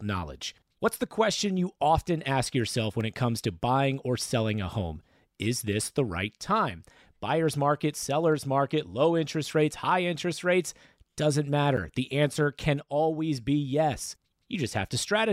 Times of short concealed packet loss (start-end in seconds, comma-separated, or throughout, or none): none